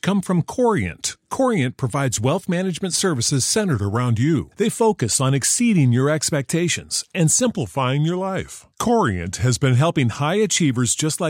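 Drift correction step in this speech, from 3.74 to 4.37 s after "provides wealth management services" and 7.45 to 9.76 s after "exceeding your expectations and": playback slows about 6.4% and drops about a semitone, likely clock-matching rate adjustment.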